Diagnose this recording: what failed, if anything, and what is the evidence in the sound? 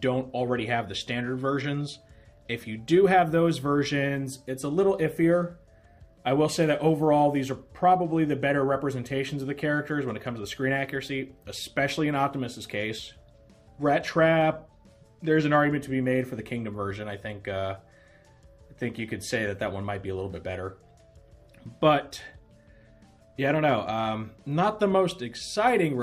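Nothing stood out on listening that would point to a failure at any stage of the chain.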